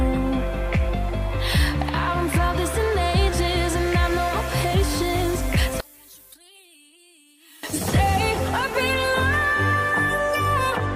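The audio has one fault, between 5.80 and 7.63 s. Over that span the level falls by about 27 dB and the centre of the sound all but disappears, leaving only a faint residue. The likely cause is one channel inverted: with one stereo channel in reversed polarity, everything common to left and right cancels when the two are summed to mono, so only their small difference survives for those 1.8 seconds.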